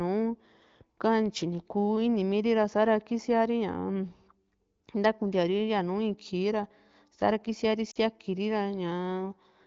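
At 7.91 to 7.98 s there is a short gap of lost AMR speech frames, about 40 ms long, which fits two consecutive 20 ms frames failing their checksum. The AMR-WB decoder fills the hole by repeating the last good pitch and vocal tract settings while ramping the gain down, so the speech briefly smears and dips rather than cutting cleanly. It then comes back weak or rough for a moment. The surrounding audio carries light wideband codec coloration, consistent with a rate near 15.85 kbit/s.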